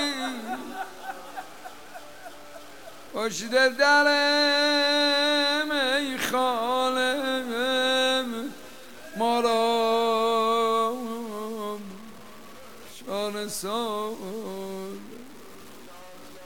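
Low bit depth without dither runs throughout, likely from truncating the audio to about 7 bits with no dither. The rounding error tracks the signal, so quiet passages turn gritty, with grainy distortion sitting only about 25 dB below the sound.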